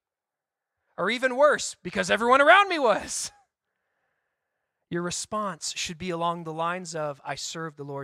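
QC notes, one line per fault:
No faults found in this speech clip. Nothing here needs a QC entry.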